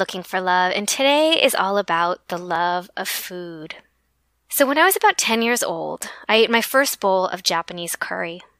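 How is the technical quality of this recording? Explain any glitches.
The speech has one audible glitch, at 2.56 s. It is an overlap between stream segments: two adjoining segments claimed the same stretch of time, so the player trimmed the overlap away from sound that wasn't actually duplicated. About 19 ms of speech vanishes, and the waveform jumps across the gap, producing a brief click or tiny skip.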